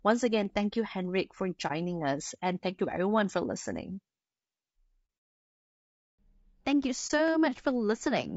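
Speech runs rough and grainy throughout, with plainly audible roughness sitting between the voice harmonics and a thin, synthetic-sounding top band. This is likely low-delay AAC compression (AAC-ELD) at a bitrate fitting about 32 kbps, whose short frames smear pitch detail. It is tied to the voice's harmonic structure, unlike steady background hiss. AAC frame loss with muting leaves brief dips at 1.67–1.72 s, 5.06–5.09 s and 7.07–7.11 s, each about 30 ms and consistent with one lost frame. Overlapping windows fade the sound out and back in, unlike a hard-cut dropout.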